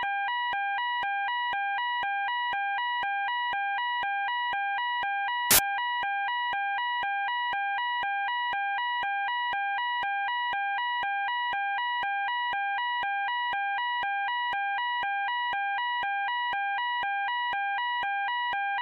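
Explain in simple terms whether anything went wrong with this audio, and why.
At 5.51 to 5.59 s there is a burst of loud hiss: samples built from the wrong bytes. For that short stretch, the player assembled each sample's bytes wrongly, so tiny rapid details became huge values, turning the sound into noise.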